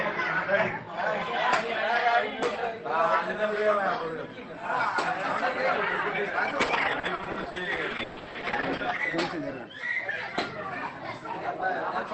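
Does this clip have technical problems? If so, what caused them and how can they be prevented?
Yes. From 6.57 to 8.91 s, repeated packet loss (robotic sound) occurs: packets on the call path kept arriving late or not at all, and each gap, the longest about 140 ms, was patched by extending the previous sound, leaving roughly a quarter of that stretch choppy. Preventing it means giving the call a more stable network link, with less congestion and a wired rather than wireless connection, plus enough jitter-buffer depth or forward error correction to cover brief losses.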